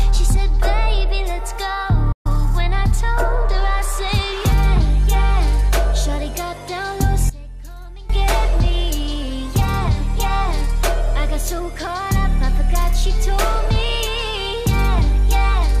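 At 2.12 s a digital broadcast dropout mutes the audio for about 128 ms: corrupted frames force the receiver into an 8 ms fade to silence, consistent with roughly four lost frames. From 7.30 to 8.10 s the sound drops by about 19 dB, likely one channel inverted, so common content cancels when the channels are summed to mono.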